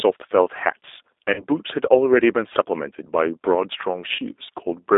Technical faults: G.729 codec; VoIP packet loss concealed by the speech codec

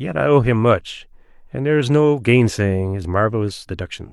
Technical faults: none

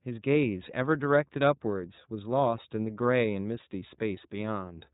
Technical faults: iLBC codec

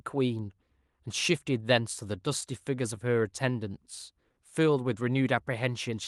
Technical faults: scattered short gaps; short stall from a late packet; jitter buffer slow-down

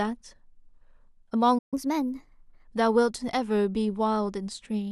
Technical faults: playback stall; catch-up at higher speed

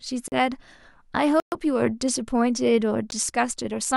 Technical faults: block of digital silence

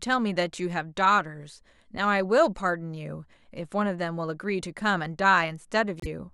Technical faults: corrupt frame decoded

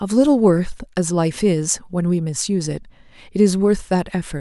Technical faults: none

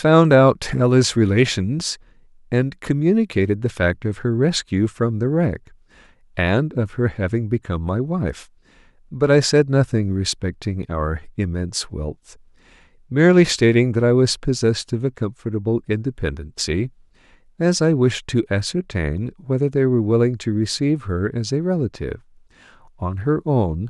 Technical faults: none

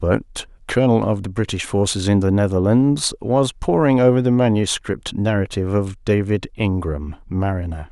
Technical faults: none

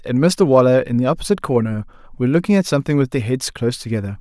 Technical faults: none

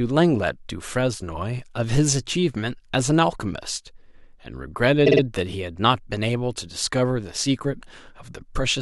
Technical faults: repeated frames

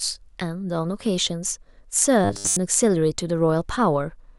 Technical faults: robotic sound from repeated short buffers

